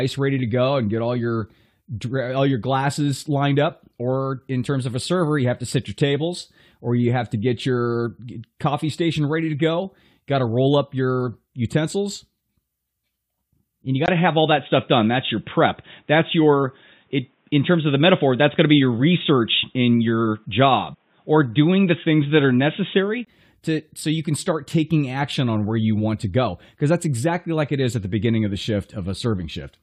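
Speech turns dull and boxy at 14.06 s, after "and you", following a 20 ms gap. Nothing above 3.8 kHz remains, the level shifts by roughly 5 dB, and faint new noise appears until 23.27 s, before "to so you can". The input likely switched to a poorer device.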